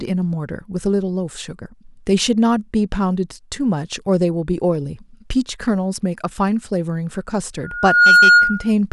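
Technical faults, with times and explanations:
7.63–8.72 s: loudspeaker feedback squeal. A 1.4 kHz tone swells within about half a second to well above the speech, shown as one bright horizontal spectrogram line.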